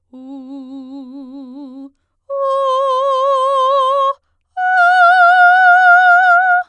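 Nothing goes wrong anywhere in this bit of music, so there are no faults to walk through.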